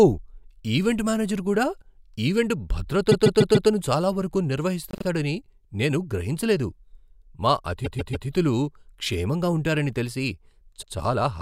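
Stutters at 3.11–3.69 s before "చాలా వరకు", 4.91–5.05 s just after it, 7.84–8.27 s, and 10.81–10.93 s after "క్షేమంగా ఉంటారని తెలిసి" each replay a 72–144 ms slice. These are repeated frames: compressed blocks delivered again, stretching the speech.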